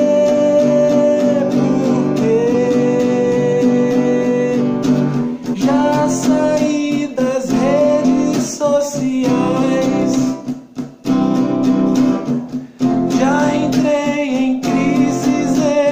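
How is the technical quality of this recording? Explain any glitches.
The recording has compressed frames skipped at 2.53, 5.53, 8.04 and 9.62 s. Whole frames of about 23.2 ms are dropped, so the audio jumps ahead by roughly 100, 150, 70 and 20 ms. Overlapping frames smear each join into a brief blip. The spectrogram shows a slight vertical discontinuity, not a sharp click spike.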